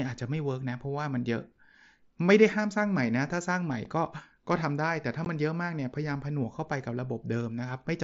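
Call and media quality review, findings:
Unconcealed Bluetooth headset packet loss on the headset-to-phone link: lost voice frames replaced by silence or an idle pattern, no concealment. Short hard-edged holes in the speech at 3.84 s (7.5 ms, fits one frame) and 5.25 s (15 ms, fits two). Light mSBC grain on loud sounds.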